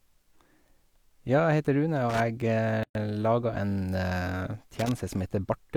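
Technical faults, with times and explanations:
2.10 to 2.20 s and 4.75 to 4.91 s, loose connector crackle: two short, irregular bursts of scratchy crackle break into the speech, the second lasting a little longer at about 0.17 s. A worn or dirty contact in the signal path is making and breaking as it shifts, chopping the audio on and off many times in a fraction of a second, and each sudden change in any DC on the line lands as a pop, so the bursts sound rough and uneven rather than like a steady buzz.
2.83 to 2.95 s, gap at a join of encoded pieces: the speech suddenly drops out for about 117 ms, with blurred edges, then resumes exactly where it left off, with nothing skipped. The audio was encoded in separate pieces, here about 4 s long, and joined without trimming. The start-up delay of one encoder run and the padded final frame of the other were both kept, leaving a short block of silence inside continuous sound that the codec smears at its edges.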